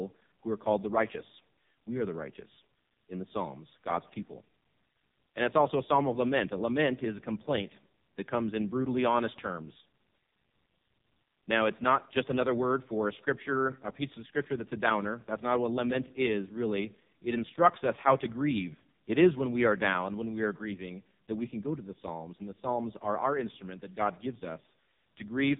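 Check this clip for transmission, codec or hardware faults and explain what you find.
One codec fault runs through the whole speech clip. AMR narrowband mobile codec damage is present throughout: the audio passes through a vocal-tract model with sparse pulse excitation, and nothing above 3.8 kHz survives. The heavy buzzy, synthetic quality fits the lowest 4.75 kbps mode.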